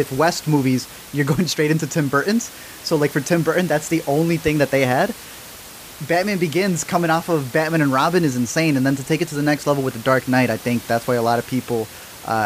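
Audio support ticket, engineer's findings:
No system fault found in the speech; only the room's own background noise, about 19 dB below the voice level, which is part of the recording rather than the signal chain.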